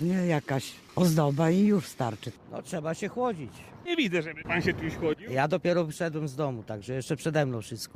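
At 3.85 s the receiver threw away a stretch of audio, either lost in transit or discarded when the jitter buffer overflowed, while later audio was already queued. This skip ahead removes roughly seven tenths of a second, and nothing fills the gap. The sound on either side is butted together almost directly, so playback lurches forward abruptly, with a piece simply absent and the delay shortened by about the same amount.

From 5.04 to 5.62 s the jitter buffer was holding more audio than its target. To bring the delay back down, it cut out many small slices, each one or a few pitch periods long, in quick succession, about forty milliseconds in all. This jitter buffer speed-up makes that passage run at 106% of normal speed with the pitch unchanged, so it sounds slightly rushed rather than higher.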